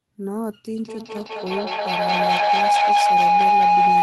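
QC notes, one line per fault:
0.79–4.02 s, feedback howl: each trip from loudspeaker back into the microphone returns louder, so repeats grow rather than fade and collapse onto a tone around 700 Hz, with the loop repeating roughly every 200 ms and peaking about 11 dB above the speech, unbroken to the end.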